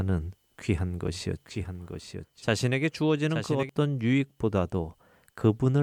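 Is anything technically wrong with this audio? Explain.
Yes. From 1.07 s to 3.69 s the speech has a doubled audio track. A second copy of the same speech runs about a second behind the original. It sits roughly 10 dB quieter. The likely cause is the signal being captured twice, once through a slower path. The copy is full-band and dry, with no decay or room colour. It starts and stops abruptly, so it sounds like a quieter, out-of-step repeat.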